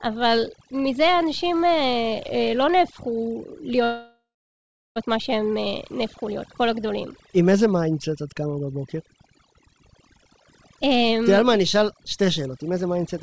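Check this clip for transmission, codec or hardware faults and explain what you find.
Three kinds of fault are present: overdone noise removal across the whole speech clip, one call audio freeze, and three jitter buffer speed-ups near the end. The band-limited sound, with nothing above 8 kHz, fits a 64 kbps G.722 call codec.

Overdone noise removal runs from start to finish. A noise suppressor set far too aggressively has pushed individual frequency bands down or out whenever they came close to its noise estimate, and the quieter parts of the speech were removed along with the noise. The background collapses to near silence dotted with twinkling specks.

The call audio freeze runs from 3.84 s to 4.98 s. The last sound before the break is drawn out as a fading buzz or hiss, then about 0.7 s of silence follows, for a hold of about 1.12 s in total. When the sound resumes it picks up exactly where it left off, so nothing is lost, but everything after it arrives about 1.12 s later. 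The likely cause is packets delayed in transit that left the jitter buffer empty, with the receiver filling the gap until they arrived.

Jitter buffer speed-ups occur at 10.14–10.41 s (about 114% speed), 10.82–11.27 s (108%) and 12.49–13.15 s (108%). Each time, the receiver had more audio queued than its target and trimmed it by cutting out many short pitch-period pieces in a row, a few tens of milliseconds per stretch. The pitch stays the same, but the speech runs noticeably quicker and sounds hurried over those spans.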